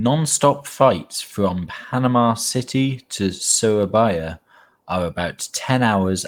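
No technical faults can be heard anywhere in this speech recording. There are no events to place on the timeline.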